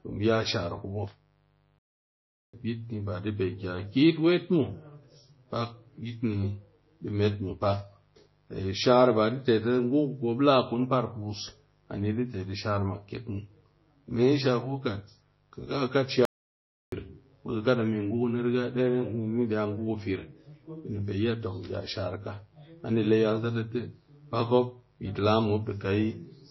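Mains buzz runs through the whole speech recording: a raspy 50 Hz hum with harmonics, faint at roughly 40 dB below the voice, from switching spikes leaking in twice per mains cycle. MP3 compression damage is plainly audible throughout: watery, swirly sibilants, likely from a low-bitrate encode, around 24 kbps, that cuts treble and drops weak frequency lines. Playback stalls occur at 1.79–2.54 s (0.75 s) and 16.25–16.92 s (0.67 s), where the sound falls silent mid-flow, likely because the player ran short of data, before resuming.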